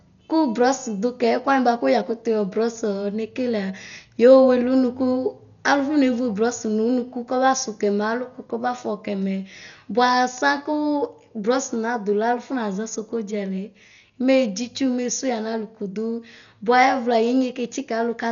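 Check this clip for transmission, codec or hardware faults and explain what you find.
There's one fault, and it runs the whole way through. The speech sounds dull and heavily damaged, with nothing above 6.9 kHz and rough, fluttery noise. That's likely Dolby Digital compression at a starved bitrate, around 48 kbps, with empty bands filled by dither noise.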